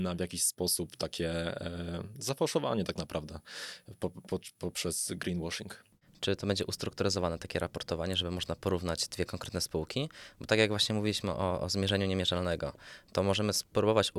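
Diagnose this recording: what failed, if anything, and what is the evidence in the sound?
A block of digital silence sits at 11.89 s, immediately after "właśnie mówiliśmy o o". The dropout lasts only about 0.73 ms, so it is heard as a single tick rather than a gap. The stage is the driver or buffer: the output stream briefly went silent with no fade. The length fits one 32-sample block not being filled in time.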